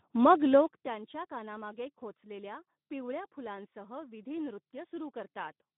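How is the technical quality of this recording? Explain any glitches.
The quality's pretty rough: the whole speech clip carries plainly audible Speex codec damage from start to finish. Speex is a CELP coder with only a thin budget for the excitation here, so the voice comes out hoarse and grainy, in a narrow 150 Hz to 3.7 kHz band, which fits a rate of around 11 kbps.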